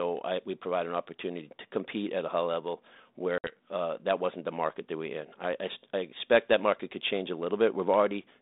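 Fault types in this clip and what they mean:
Packet loss on an ADPCM call: about 60 ms of the 32 kbit/s G.726 stream, a few packets, drops to silence after "at a high level", then "uh that wasn't the" returns slightly distorted while the decoder resynchronises.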